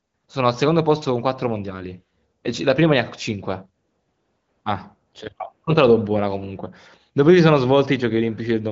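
No technical faults can be heard in this speech.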